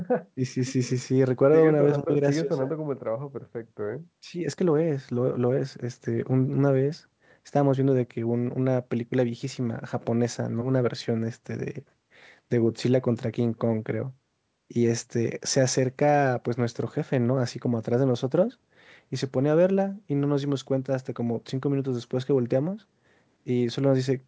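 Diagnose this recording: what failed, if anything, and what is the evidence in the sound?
Nothing failed, and the sound gives no evidence of a fault at any stage, only the expected wideband call chain with its top end stopping at 8 kHz.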